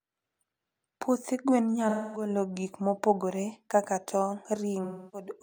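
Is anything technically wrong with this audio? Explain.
Yes. The speech has two stretches of AAC frame loss with concealment, from 1.89 to 2.29 s (about 0.26 s of lost audio) and from 4.83 to 5.31 s (about 0.30 s). In each, the decoder lost a run of compressed frames and covered the hole by reusing the last good spectrum with altered phase or interpolated energy. The result is a smeared, phasey, noisy patch rather than a hard silent gap, which is what sets it apart from a plain dropout or mute.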